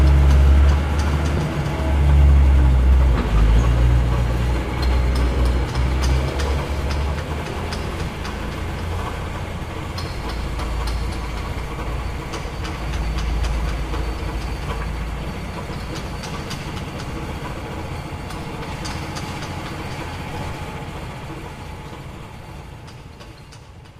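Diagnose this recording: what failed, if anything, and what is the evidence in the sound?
Compressed frames skipped at 6.67 s, a codec-stage failure. The sound jumps forward abruptly, losing roughly 70 ms, which fits about three frames of 20 ms each that never reached the output, either because they were missing from the stream or because the decoder rejected them as corrupt.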